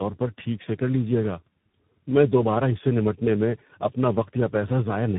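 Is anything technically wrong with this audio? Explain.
Yes. Throughout, this speech shows tandem speech coding: it passed through three speech codecs in a row, G.729A, then iLBC, then CVSD, with G.711 mu-law links between, each re-encoding the last one's damage. The result sounds rough, muffled and warbly, with nothing above 3.8 kHz.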